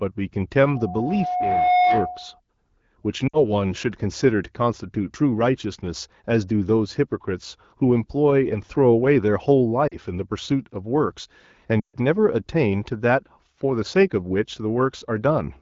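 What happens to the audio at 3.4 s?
Lost AMR speech frames, 3.27 to 3.51 s. About 60 ms of speech failed its checks. The decoder stretched the last good sound, faded it quickly, then resumed weakly.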